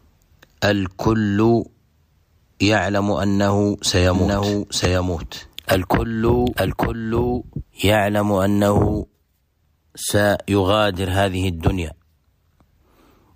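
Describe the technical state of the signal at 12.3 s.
At 12.3 s the signal is intact, with no audible fault at that point.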